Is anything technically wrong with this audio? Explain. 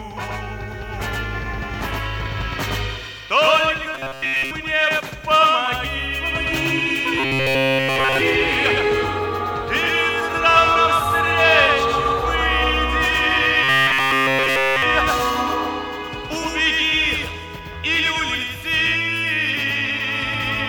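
Yes, two problems.

The first runs through the whole clip: a doubled audio track. A second full-band copy trails the original by roughly a tenth of a second, sitting about 5 dB below it. It's likely the signal being picked up twice, once through a slower path. Because the copy carries no decay or room tone, it doesn't sound like reverb. It's a dry, flammy slapback that smears every onset.

The second is robotic sound from repeated short buffers, at 3.95–4.51 s, 7.20–8.21 s and 13.63–14.82 s. The likely cause is audio arriving too seldom, so the software loops the last short chunk and skips the real material in between. The buzz sits at 134 Hz, which fits a loop of about 7.5 ms. The first stretch is partly looped, and the later two are looped throughout, giving a rigid metallic drone that only loosely tracks the underlying sound.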